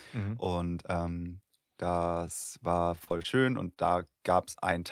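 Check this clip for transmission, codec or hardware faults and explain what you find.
Three transmission faults are audible, all from lost packets.

From 2.83 to 3.26 s, right after "mhm und ähm das", there is repeated packet loss with a robotic sound. Seven gaps arrive in quick succession, the longest 30 ms. Each is patched by extending the preceding speech. About 30% of the stretch is concealed, so it sounds choppy.

Short concealed packet loss occurs at 3.74 to 3.78 s and at 4.53 to 4.56 s. Each time about 20 ms of audio failed to arrive. The receiver filled the hole by continuing the last sound and then blended back. Each one is heard as a brief smear or wobble in the speech.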